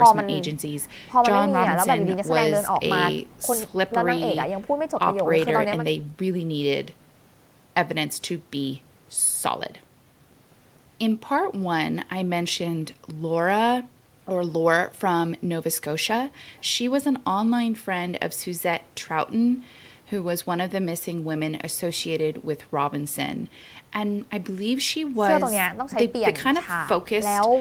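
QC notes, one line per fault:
No faults are heard in this speech recording. There is nothing here that calls for a QC note.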